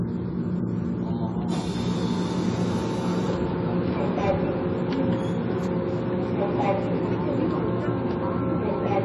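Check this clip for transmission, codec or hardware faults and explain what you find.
There is one fault, running through the whole clip: AAC compression, heard as nothing above 11.5 kHz plus clearly audible warbling, smeared artefacts. The likely cause is AAC-LC coding at a low rate, consistent with about 32 kbps. The coder starves the upper bands and quantises coarsely. Unlike a plain low-pass filter, it also leaves a fizzy, swirling texture in what remains.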